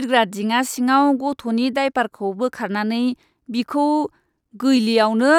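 No audible faults in it.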